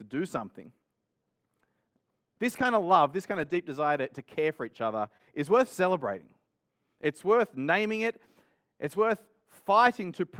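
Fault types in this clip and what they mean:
Lost packet rebuilt from error correction: Packets that never arrived were replaced with the low-bitrate copies carried in the following packets, so the speech has no gaps but briefly turns rougher and noisier. This happens four times, with the longest stretch between "of love this" and "desire to to care".
Short concealed packet loss: Around 5.2 s, between "care for each other" and "is worth celebrating", about 20 ms of audio never arrived in time. The receiver extended the preceding sound to cover the hole and then blended back in, which leaves a brief smear.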